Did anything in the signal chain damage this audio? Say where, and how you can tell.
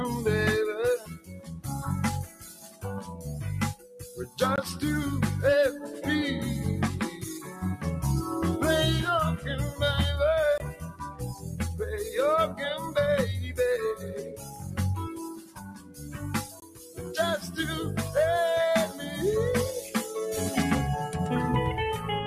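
Yes. The noise suppressor applied to music or sounds was active for the whole clip, in the call-processing stage. A speech-oriented suppressor treats sustained tones and decaying tails as noise, so the level swings by around 10 dB, with attacks passing and held sound sinking.

Sound cut by the noise suppressor appears at 0.99–1.66, 2.25–3.26, 3.75–4.38, 7.14–7.62, 10.72–11.60, 12.47–12.90, 13.96–14.79 and 15.34–17.02 s. Steady passages drop by about 5 to 13 dB, deepest at 0.99 and 15.34 s, and decays are clipped short.

A gap between chunks, about 21 ms of silence, occurs at 4.56, 10.58 and 16.60 s, exactly 6 s apart. That regularity points to chunked delivery in the codec or playback stage, where padding or a late chunk start leaves a hole at each join.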